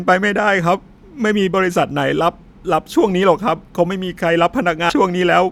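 At 4.89 to 4.96 s, near the end of the speech, compressed frames are skipped. A run of coded frames never reaches the output, either lost from the file or rejected by the decoder, so the speech jumps forward by about 150 ms, consistent with roughly seven 20 ms frames. Unlike a dropout, there is no silent gap, only missing material.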